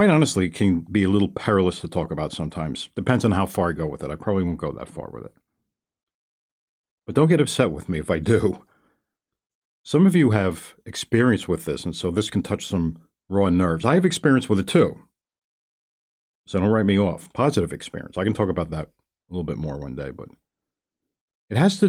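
No technical faults can be heard anywhere in the recording.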